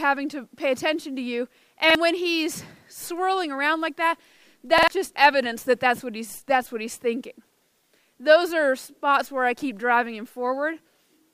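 The audio has three repeated-buffer stutters, where late data made the device replay its last block of roughly 46 ms, which fits a 2048-sample buffer. The block plays twice at 1.90 s and three times at 4.78 s and 7.52 s. Each shows as identical adjacent waveform or spectrogram segments with hard vertical seams.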